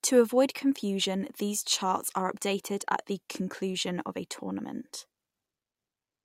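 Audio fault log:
No faults found anywhere in this speech clip.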